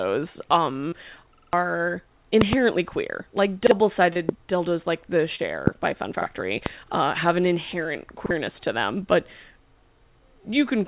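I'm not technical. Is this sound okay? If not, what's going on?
No. There are three kinds of fault in the clip.

Short concealed packet loss, at 0.89 s, 4.13 s (just before "dildos like the") and 5.35 s: about 30 ms of sound never arrived, and the receiver papered over the gap by stretching what came just before. You hear a brief smear or wobble rather than a repeat, which sets it apart from the stutters.

Repeated buffer, at 3.67 s, 6.22 s and 8.26 s, and most noticeably from 1.35 to 1.53 s: the playback device ran out of fresh sound and replayed its last chunk, about 46 ms long. At 1.35 s that chunk plays four extra times. Each repeat is an exact copy with an abrupt join, so it sounds like a stutter, not a smear.

Loud pop, with two in quick succession between 2.41 and 2.55 s, then single pops at 4.29 s (just before "dildos like the"), 5.67 s (just after "dildos like the") and 6.66 s: sharp bursts well above the voice, which carries on underneath. 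They are most likely electrical spikes from a connector, switch or static. They sit on top of the sound instead of replacing any of it.

The call line itself limits the sound to phone quality, with nothing above 4 kHz.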